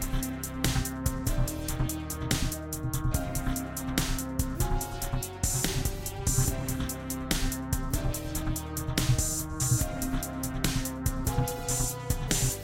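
No technical faults occur at any point in the sound.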